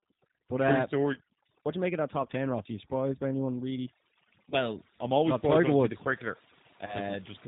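From the start, the speech runs through overdone noise removal. The reduction was pushed too hard, so bands near its noise estimate get pulled way down along with the quieter bits of the voice. That leaves a lowered background broken up into little twinkling specks.

Also across the whole clip, the G.729 codec damage is plainly audible. Everything above 4 kHz is gone, and the voice is rebuilt from a vocal tract filter, a pitch predictor and a few pulses per frame, which fits an 8 kbit/s G.729A stream. It comes out a bit rough and synthetic.

Then there are three short dropouts covered by VoIP packet loss concealment from the speech codec, at 1.14 to 1.19 s, 4.50 to 4.58 s and 6.86 to 6.98 s. Each gap fits a single lost 20 ms packet. The decoder stretches its last pitch and filter with falling gain, so you hear a brief, fading smear. Because each frame builds on the one before, the voice stays weak a little past the gap.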